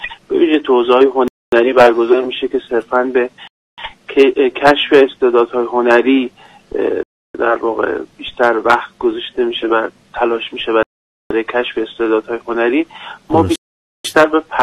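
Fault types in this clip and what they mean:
Bluetooth stall: at 1.28, 3.47, 7.03, 10.83 and 13.56 s the sound cuts to silence for 0.25 to 0.49 s, then picks back up. This is likely the headphones' buffer running dry while interference delayed packets, pausing playback until retransmissions arrived.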